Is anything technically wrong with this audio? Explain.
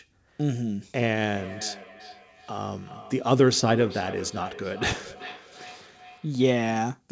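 Yes. From 1.16 to 6.94 s the speech has a feedback echo between two devices. Each phrase returns roughly every 0.4 s, peaking at about 18 dB below the speech, thinner and ringier on each pass. A second device in the room replays what the local microphone sent. The local microphone picks that playback up again, and the echo canceller cannot remove sound it did not play itself.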